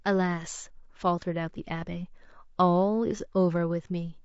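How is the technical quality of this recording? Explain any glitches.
The speech carries plainly audible low-delay AAC compression throughout. The likely cause is an AAC-ELD encoder, whose short frames resolve pitch harmonics poorly at a low rate, consistent with about 32 kbps. The speech sounds rough and grainy, with noise filling the gaps between harmonics.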